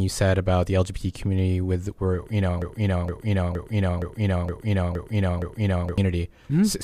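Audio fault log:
2.62–5.98 s, broken-record loop: a 0.47 s fragment of speech repeats exactly, seven times back to back, and the speech that belonged there is lost, likely because the player or stream stalled and kept resending its last fragment. The waveform and spectrogram show identical blocks repeating every 0.47 s.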